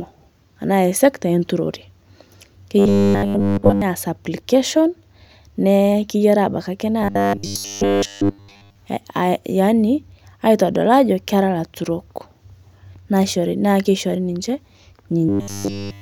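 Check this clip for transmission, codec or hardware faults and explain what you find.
Robotic sound from repeated short buffers appears three times in the speech: 2.79 to 3.82 s, just before "naas application"; 7.02 to 8.77 s, just after "keyarii abaki akee"; and 15.29 s to the end. Each stretch becomes a rigid, metallic buzz locked at 100 Hz. The likely cause is a 10 ms block being replayed over and over while the real audio is skipped. Unlike mains hum, the buzz replaces the speech rather than sitting under it, and unlike dropouts there is no silence.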